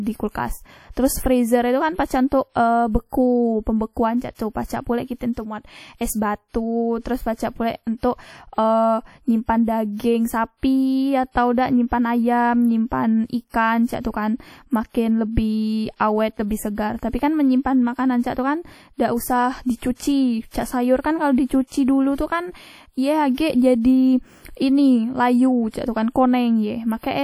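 Across the whole clip, the speech carries plainly audible codec damage. The most likely cause is WMA compression. The sound rings and washes. A hiss rises and falls with the signal. The damage points to a bitrate near 48 kbps. The band still reaches 20.1 kHz, so the harm is not a missing top end. It comes from coarse quantisation in long transform blocks. Quiet detail is lost or smeared over tens of milliseconds.

From 4.35 to 4.39 s there is pre-echo. A sharp attack lands late in a transform block. The quantisation noise is spread over the whole block, so it spills backward. About 45 ms of hiss comes before the onset. The attack itself sounds soft and smeared, not crisp. The noise was sized for the loud part. It fills the quiet moment ahead of it.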